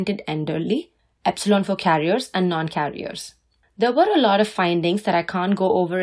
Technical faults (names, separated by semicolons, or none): none